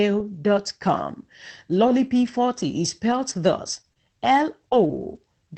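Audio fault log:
1.87, 2.23, 2.27 and 3.11 s, lost packet rebuilt from error correction: four separate 20 ms packets never arrived, but each following packet carried a low-bitrate backup copy, which the Opus decoder played in their place. No gap opens. Each of these four short moments sounds grainier and noisier than the surrounding audio, because the backup copy is coded far more coarsely.
3.81 to 5.17 s, scattered short gaps: over this stretch about four packets were lost or arrived too late, with none of the holes longer than roughly 20 ms. The receiver filled each hole by extending the sound just before it. Together the fills cover about a tenth of a second, a small share of the span. The result is a few ticks and momentary smears dotted through otherwise continuous audio, with the upper band capped near 8 kHz by the call codec.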